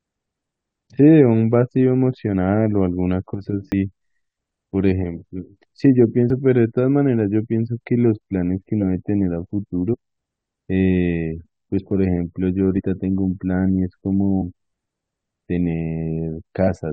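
At 3.70–3.74 s the speech jumps forward by roughly 40 ms, the first case of compressed frames skipped. Whole coded frames never reached the output, so the decoder simply carried on from a later point. The same thing happens at 6.3 s, again losing around 40 ms, then at 9.93–9.95 s and 12.77–12.81 s, each dropping something like 70 ms. The cue is missing time.

Between those, at 8.81–8.83 s, a short glitch rises to somewhere near -15 dBFS. This is a corrupt frame decoded. Flipped bits in a few consecutive frames were accepted by the decoder, which then placed energy at frequencies that do not belong there. Unlike the skips, nothing is lost from the timeline. Instead foreign energy sits on top of the speech for about the span of the damaged frames.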